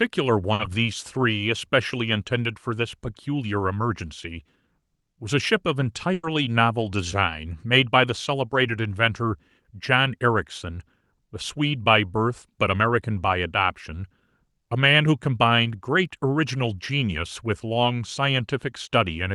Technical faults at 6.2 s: burst of packet loss

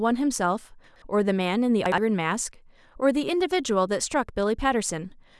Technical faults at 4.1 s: none

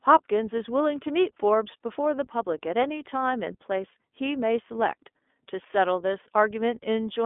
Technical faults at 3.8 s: iLBC codec

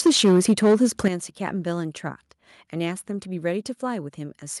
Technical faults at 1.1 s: microphone overload; microphone volume stepped down

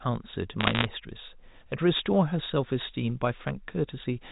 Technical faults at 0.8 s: bit errors on a digital phone line

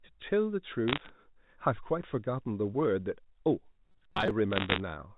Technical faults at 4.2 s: robotic sound from repeated short buffers

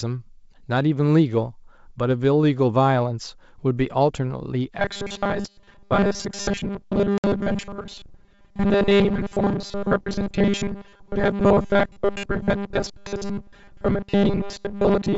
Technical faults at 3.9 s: none

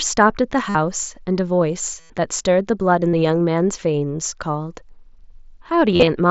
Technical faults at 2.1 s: concealed Bluetooth headset packet loss

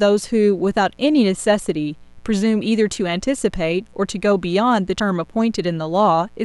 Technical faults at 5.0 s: mains buzz; compressed frames skipped

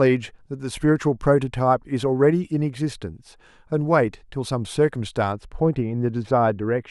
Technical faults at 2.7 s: none

